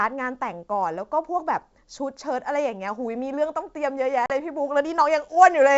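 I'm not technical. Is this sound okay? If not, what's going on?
No. Around 4.26 to 4.32 s there is packet loss on an ADPCM call. A couple of data packets went missing, and the receiving end lost track of the sender's running estimates. You hear an abrupt silent gap of about 40 ms, then the speech returns slightly rough before settling.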